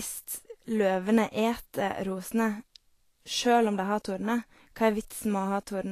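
From start to finish the speech carries a hiss and grain in the top end, with nothing at all above 14.2 kHz, and the sibilants and consonant attacks come out smeared and rough. That's likely Vorbis compression at a low quality setting, which fits a bitrate around 35 kbps. The encoder has lopped off the highest band and quantised what's left of the treble so coarsely that the fine detail turns into noise.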